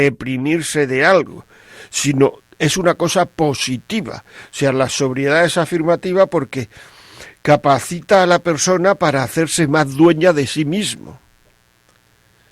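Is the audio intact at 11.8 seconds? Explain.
No. At 11.8 seconds the speech carries a mains buzz that starts at 1.26 s and continues to the end of the clip. Sharp switching spikes, of the kind a dimmer, rectifier or unshielded lead lets in, arrive twice per 60 Hz cycle and spray harmonics up into the kilohertz range. The result is a raspy, gritty drone sitting about 40 dB below the speech. A plain hum would be a smooth, dull tone at 60 Hz alone, without that bright edge.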